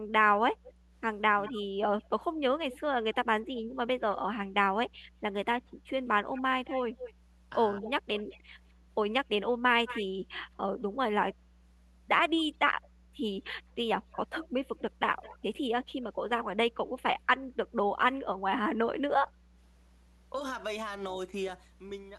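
Mains hum runs through the whole clip: a steady 60 Hz tone, about 20 dB below the speech, from power-line pickup such as a ground loop or nearby transformer. On a spectrogram it is an unbroken horizontal line at 60 Hz, with faint harmonics above.

Echo leak appears at 0.65–3.15 s, 6.32–8.39 s, 9.86–10.44 s, 12.37–12.88 s and 14.12–15.38 s. A copy of the speech trails it by about 0.21 s, likely loudspeaker pickup the far-end echo canceller failed to remove. The copy ranges from barely audible to moderately loud. A spectrogram shows the speech pattern repeated, shifted slightly right.

Speech suppressed in double talk occurs briefly at 7.80–7.86 s, a slight dip lasting around 70 ms. A deep cut of roughly 200 ms follows at 15.84–16.09 s. The echo canceller likely mistook overlapping talk for echo and attenuated it. The waveform shows a sudden notch in the speech envelope.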